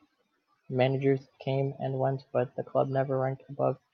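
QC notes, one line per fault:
No faults to note.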